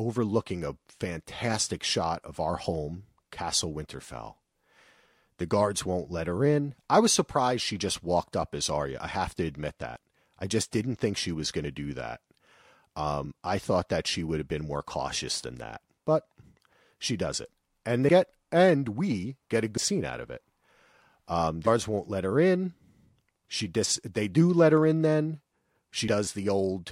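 Compressed frames are skipped four times, at 9.96 s, between "think she was going" and "to do that" at 11.63 s, between "and we get a" and "scene out of it" at 19.76 s, and just before "won't let her in" at 21.66 s. The speech jumps ahead by roughly 30 to 100 ms at each of these points.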